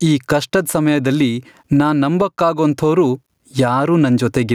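Gain pumping runs through the whole speech clip. The level swing is roughly 15 dB. The likely cause is input gain set far too high, with a fast limiter or compressor clamping down on every loud peak. Loud and quiet passages sit unnaturally close together. The result sounds squashed.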